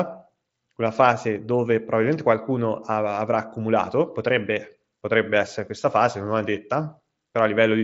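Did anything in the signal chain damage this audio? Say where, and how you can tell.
No, no fault anywhere.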